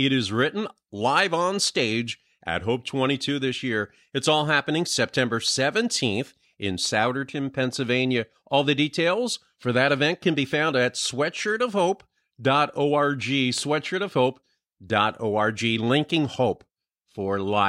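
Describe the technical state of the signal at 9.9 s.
At 9.9 s the speech signal is intact, with no audible fault at that moment.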